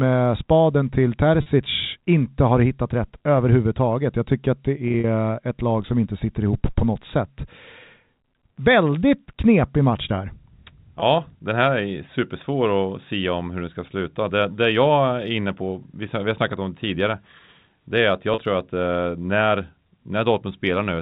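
At 1.42, 4.88 to 5.04, 11.0 and 18.34 s, packet loss with pitch repetition briefly holds the speech on a buzzy, frozen cycle, seen as copied waveform periods and flat harmonic stripes.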